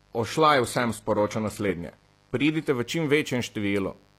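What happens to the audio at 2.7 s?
At about 2.69 s the adaptive stream, which had been starting at a low bitrate, steps up to a better version. From 0.0 s the player fetched a lean encoding so playback could begin quickly, then switched once it had gauged the connection. Before the switch the speech has nothing above 12.4 kHz and heavier codec artefacts, which fits a low-rate HE-AAC stream. At 2.69 s the treble and clarity return abruptly, with no gap in the audio.

Running through that moment, and the whole clip, is a mains buzz at 50 Hz, sitting roughly 35 dB below the speech. Sharp switching spikes from a dimmer, rectifier or missing shield leak in twice per mains cycle, and their harmonics stack up into the kilohertz range. The result is a steady, raspy buzz under the speech.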